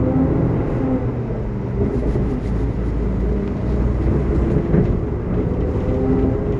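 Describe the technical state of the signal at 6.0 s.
At 6.0 s the signal is intact, with no audible fault at that moment.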